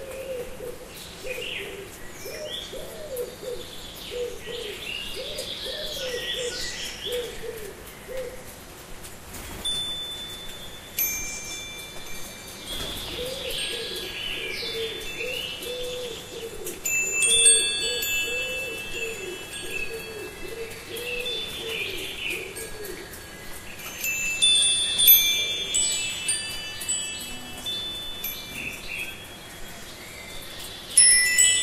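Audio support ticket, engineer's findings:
Listened through the sound recording and nothing stood out.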